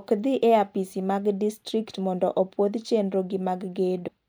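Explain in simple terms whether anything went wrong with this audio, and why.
Near the very end of this speech clip, from 4.04 to 4.08 s, there is a brief glitch lasting under a twentieth of a second. That is damaged data in a compressed stream: part of the compressed file was wrong, so the decoder misread that spot and had to hunt for the next good frame before playing normally again. Unlike a simple dropout, this fault comes from the decoder losing its place in the file.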